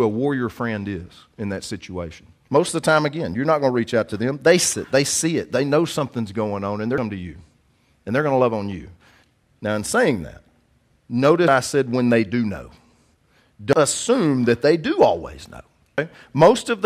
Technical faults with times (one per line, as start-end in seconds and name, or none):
4.73 audio missing between chunks
6.98 audio missing between chunks
11.48 audio missing between chunks
13.73 audio missing between chunks
15.98 audio missing between chunks